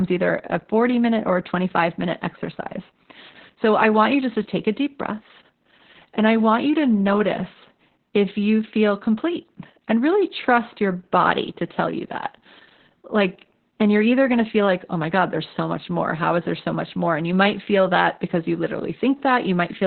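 From start to finish the speech passes through Opus voice compression working at a very low rate, which fits about 8 kbps with the SILK linear-prediction coder alone and the band cut to narrowband. Nothing is heard above about 4.3 kHz, so consonants lose their edge and the speech sounds muffled. The excitation is coded very coarsely, giving the voice a hoarse, slightly robotic grain that persists through the whole clip.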